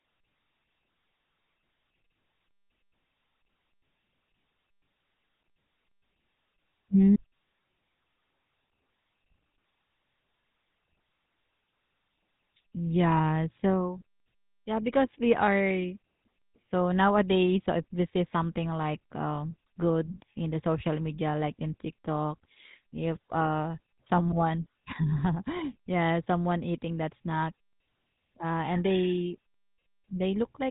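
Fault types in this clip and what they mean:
GSM full-rate codec: The whole 31-second speech clip carries the damage of the original GSM phone codec, which rebuilds the voice from a vocal-tract model excited by a sparse, regularly spaced pulse train. At a rate consistent with 13 kbps, the result is a plainly audible buzzy, gravelly texture on voiced sounds. The band stops at about 3.8 kHz, so sibilants and breath detail are missing and consonants sound dull and boxed in.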